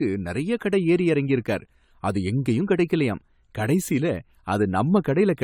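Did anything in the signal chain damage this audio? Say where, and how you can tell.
Yes, at the codec stage, throughout the speech. Generation loss gives a swirly, hollow sound with blurred attacks, likely from around seven successive lossy encodes, consistent with AAC-LC near 96 kbit/s. A spectrogram shows nothing above 17.5 kHz, scattered spectral holes, and smeared consonant onsets.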